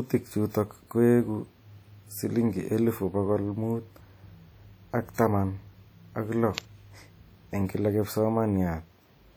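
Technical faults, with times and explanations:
throughout: WMA compression, likely, gives washy, ringing speech with hiss breathing with level, which fits about 48 kbps; the spectrogram shows smeared blocks, nothing above 20.1 kHz.
5.14–5.18 s: pre-echo, a short hiss spreading about 40 ms ahead of a sharp attack, as block-wide quantisation noise fills the quiet; the spectrogram shows a smudge before the onset.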